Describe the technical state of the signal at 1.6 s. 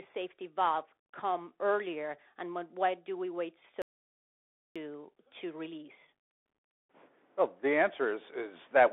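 At 1.6 s the speech has passed through a Bluetooth CVSD headset codec, present throughout the clip. The link codes each sample as a single up-or-down bit with an adapting step size, which fits a 64 kbps stream. The step cannot keep pace with sharp, loud high-frequency movement. The result is band-limited speech sitting roughly between 250 Hz and 3.5 kHz, with nothing above 3.8 kHz, scratchy sibilants, clearly audible distortion, and a granular hiss beneath the voice.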